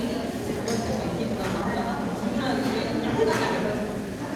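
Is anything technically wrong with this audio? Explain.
Yes. From 1.19 to 1.76 s there is a jitter buffer speed-up. The receiver had buffered too much audio, so it cut short pitch-period pieces repeatedly, removing about a fifth of a second. The sound runs at 132% speed, hurried but unchanged in pitch.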